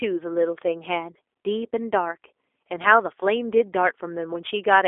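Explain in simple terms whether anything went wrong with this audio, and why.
G.729 codec damage runs through the whole clip, from start to finish. The speech was squeezed through a phone-call codec that doesn't send the sound itself. It sends a rough recipe: the shape of the mouth, the pitch, and a few pulses every few thousandths of a second, and the far end rebuilds the speech from that. Nothing above about 3.7 kHz survives, so the speech sounds muffled, thin and slightly robotic.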